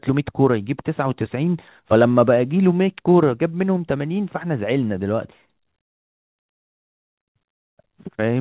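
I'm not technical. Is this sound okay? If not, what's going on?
Yes, no faults heard.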